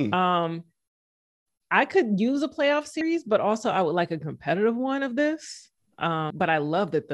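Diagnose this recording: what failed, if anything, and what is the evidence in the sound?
Compressed frames skipped, a codec or storage fault: at 3.01 s, between "could use a playoff" and "but also I would", and at 6.30 s, about 150 ms of sound vanishes in whole 26.1 ms frames. Overlapping frames smear each join into a brief blip. A spectrogram shows a discontinuity but no broadband click line.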